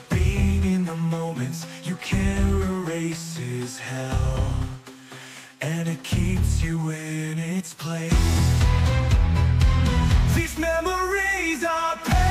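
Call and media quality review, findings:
Nothing to flag here; listened all the way and heard no technical faults anywhere in the audio.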